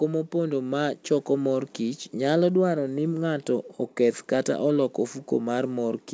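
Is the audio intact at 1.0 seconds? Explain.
No. At 1.0 seconds the automatic gain control is partway through a gain rise. Having judged the input too quiet, it lifts its gain by about 5 dB between 0.31 and 2.1 s, so the speech and background swell together until just before "nyalo dwaro ni ng'ato".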